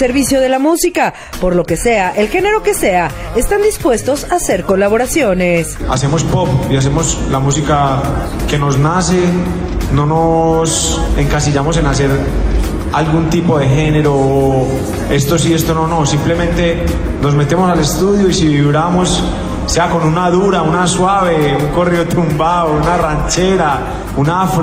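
Nothing in the recording stands out as a technical problem, and there's nothing here worth flagging.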